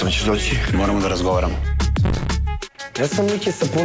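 From 2.03 to 2.27 s there's a burst of processor overload crackle: the machine can't fill its tiny audio buffers, likely a few milliseconds each, in time, and each miss replays stale audio with hard edges, so you get gritty tearing over the call-codec sound, which tops out at 8 kHz.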